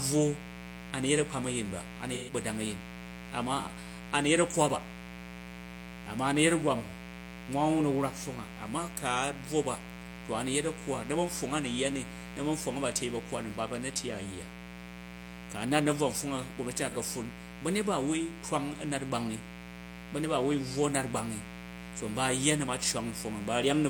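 A raspy mains buzz runs through the whole speech recording. Switching spikes on the 60 Hz supply add harmonics, sitting roughly 15 dB below the speech.

From 2.13 to 2.33 s, AAC frame loss with concealment smears the sound for 128 ms, which fits three lost frames. The decoder patches the gap from the last good spectrum. A shorter 43 ms noisy patch follows at 16.89 s.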